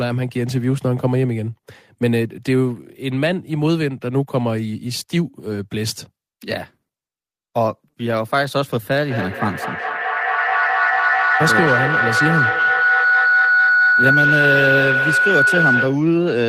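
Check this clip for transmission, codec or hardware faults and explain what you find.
A feedback howl begins at 9.03 s and runs to 16.15 s. Two devices sharing one room and call let a microphone-to-loudspeaker loop gain level each pass, building a tone near 1.5 kHz, with the loop repeating about every 200 ms, and peaking about 2 dB above speech. Unlike echo, its repeats grow rather than fade.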